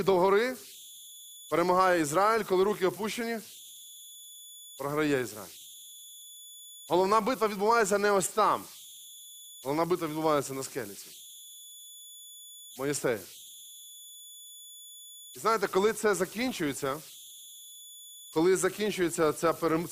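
Throughout the speech, converter idle tones sit roughly 22 dB below the signal, centred somewhere around 3 kHz. Without dither, the delta-sigma converter settles into repeating bit cycles whenever the input is small, and those cycles sound like a whistle or chirp in the pauses and a grainy texture under the speech. Unlike a fixed interference whistle or mains hum, this tone comes from the converter's own low-level behaviour, with a pitch set by the input's offset.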